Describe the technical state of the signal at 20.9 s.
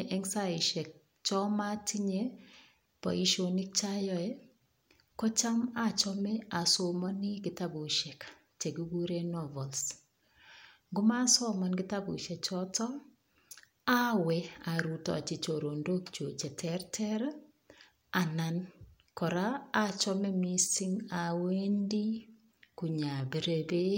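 At 20.9 s the speech sits inside a time-stretched section running from 20.38 s to 23.98 s, just after "kora achome". It plays at about 0.74 times normal speed with pitch unchanged. The slowed delivery drags. Software likely lengthened it by repeating short pieces.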